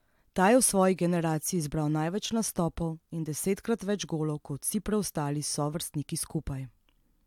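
Nothing stood out as a technical fault on listening to the speech in this clip.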